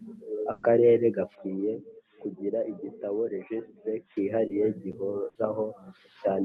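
At 0.51 to 0.65 s there's a burst of packet loss: about 120 ms of speech never arrived, so the receiver stretched the last sound and faded it out. You hear a held, dying smear, then the speech jumps ahead with that stretch gone.

From 1.35 to 4.17 s the speech turns dull and boxy, with nothing above 3.8 kHz, a drop of roughly 10 dB and a faint new noise floor well under the speech. That's likely the input switched to a poorer device. The switch happens without a gap, and after it the audio opens back up to the call path's roughly 12 kHz Opus bandwidth.

At 4.47 to 4.51 s a short concealed packet loss patches about 20 ms with continued sound that blends back in. It comes across as a quick smear or wobble.

A second burst of packet loss at 5.29 to 5.37 s does the same held-and-fading trick over about 60 ms before the speech skips forward.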